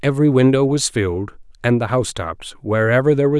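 Nothing in this bit of speech stands out as a technical fault at any point, so there's nothing to flag.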